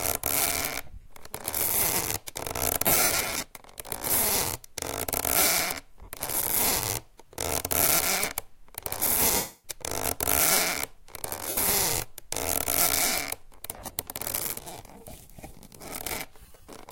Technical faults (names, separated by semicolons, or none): lost LE Audio frames